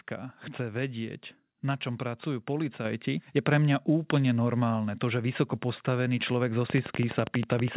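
At 2.85 s, between "vedieť na čom pracujú" and "je pre mňa úplne", the microphone volume steps up by about 6 dB. The call software judged the input too quiet and raised it at once. Speech and background jump louder together, mid-sentence.

From 6.70 s to the end, after "vysoko postavený človek zo", a train of clicks runs at 12.2 per second. They are evenly spaced and alike in shape, roughly 10 dB above the speech. The likely source is electrical interference or a struggling interface. It sounds like steady ticking over the speech. Under both faults, the G.711 call path leaves nothing above 4 kHz.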